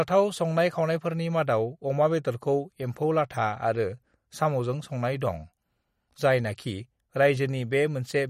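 From start to finish the speech carries plainly audible MP3 compression. Nothing comes through above 15.9 kHz, and the sound has that watery, swirly edge as weak frequency lines drop in and out between frames. It's likely the work of an encoder starved of bits, around 48 kbps.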